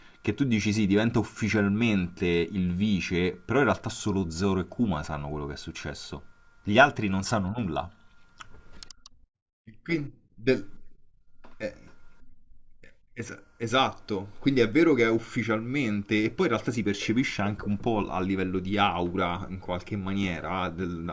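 No technical faults are audible anywhere in the recording.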